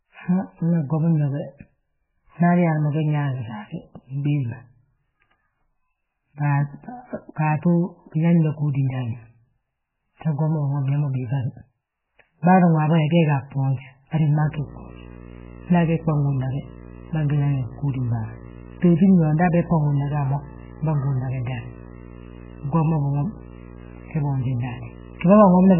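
From the start, the speech is band-limited and watery, with nothing above 3 kHz, which fits MP3 compression at a very low bitrate around 8 kbps as the likely cause. Starved of bits, the encoder drops the treble and toggles weak frequency lines frame by frame. A spectrogram shows a hard ceiling and flickering, patchy blocks, and consonant onsets look smeared.

From 14.41 s to the end of the clip, video or display buzz appears: a screen or video cable couples into the audio, adding a 60 Hz buzz with hash above it, roughly 20 dB below the speech. A spectrogram shows steady horizontal lines at 60 Hz and its harmonics. The waveform carries a small, regular ripple even in pauses.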